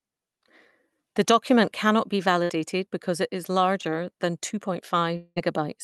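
Speech carried over a call link whose top end stops around 12 kHz, with three packet-loss faults. From 2.43 to 2.51 s, just after "document cannot be", the last sound is held as a fading buzz or hiss for about 60 ms before speech picks up again at "because it is," with a slice skipped. That is a burst of packet loss: several consecutive packets never arrived, the receiver stretched the final sound while lowering it, and playback resumed past the gap. From 3.81 to 3.85 s, after "because it is" and before "than two", there is a brief smear lasting roughly 20 ms. This is short concealed packet loss: a couple of hundredths of a second failed to reach the decoder in time, and the receiver extended the preceding sound, then blended back into the real signal. From 5.17 to 5.38 s, right after "than two", a drawn-out fading buzz or hiss of about 0.2 s runs into a short silence before sound returns, with around 200 ms of material gone. 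The likely cause is a long network dropout, where nothing arrived for that stretch and the receiver extended the last sound until it died away.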